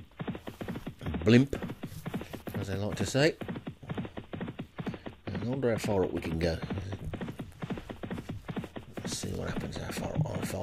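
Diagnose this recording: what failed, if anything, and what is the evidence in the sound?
Overlapping chunks at the buffer stage: about 25 ms repeats at 1.77, 4.30, 6.82 and 9.35 s, every 2.5 s, where each block starts before the previous one ends.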